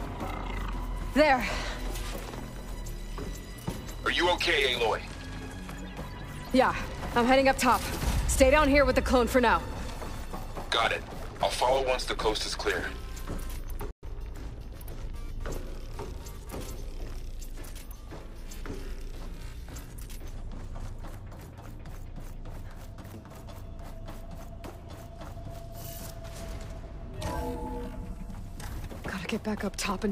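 At 13.91 s the sound cuts out for about 120 ms. This is a playback stall, likely the player running short of data or its thread being blocked. From 14.03 s to 14.15 s the audio hurries at twice normal speed without rising in pitch: time-compressed catch-up, where small pieces are cut and cross-faded to clear the delay.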